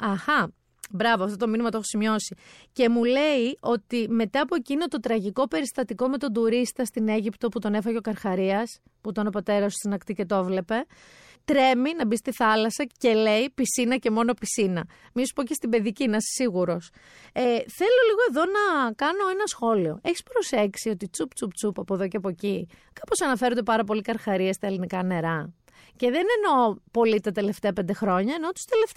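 No technical faults are audible.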